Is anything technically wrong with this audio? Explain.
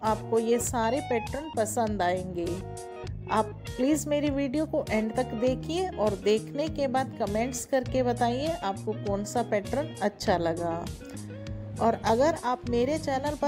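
No, nothing technically wrong can be heard in this audio. No moment in the clip stands out as faulty.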